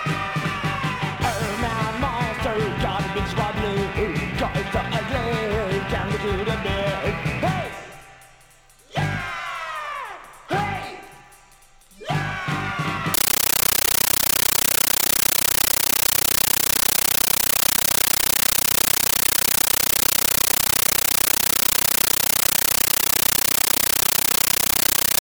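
Compressed stream played as audio, from 13.14 s to the end: the sound is replaced by harsh, very loud chattering static. A Dolby Digital (AC-3) bitstream is reaching the output as if it were ordinary samples instead of being decoded. Each coded frame comes through as a 13.3 ms burst of noise followed by silent padding, repeating at 31.25 Hz, which produces the rapid chatter. The burst density fits a 640 kbps stream.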